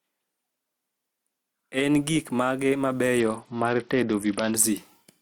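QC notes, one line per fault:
Throughout: gain pumping. The gain swings about 5 dB, likely from excessive gain hitting a fast limiter. The waveform envelope looks flattened.
3.20–4.55 s: Bluetooth SBC bit pool drop. Treble dulls and gritty noise rises, which fits the bit pool falling from 31 to 8 (near 66 kbps). The spectrogram's upper bands go dark.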